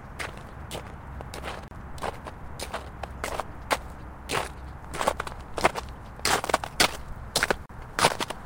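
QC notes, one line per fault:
1.68–1.71 s and 7.66–7.69 s, gap at a join of encoded pieces: the audio was encoded as separate pieces and joined without trimming, so each encoder's start-up delay and last-frame padding stayed in as silence. The sound drops out for about 32 ms and then about 36 ms, with edges smeared by the codec, and picks up exactly where it stopped, as if briefly paused mid-flow.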